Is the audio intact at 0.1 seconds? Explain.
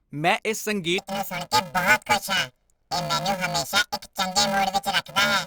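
Yes, at 0.1 seconds the speech is intact, with no fault audible at that moment.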